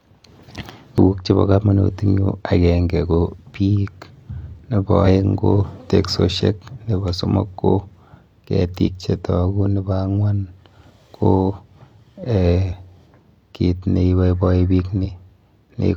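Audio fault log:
0.98 s, 5.02–5.07 s, 8.83–8.89 s, 12.68–12.74 s, 15.00–15.06 s: damaged data in a compressed stream. Corrupted bytes left the decoder unable to read those frames, so it lost sync and hunted for the next header. Each loss is a brief glitch in the speech, just before "chepo komonut" and "ko teksoshek nepo somok", and just after "kit neiboiboi".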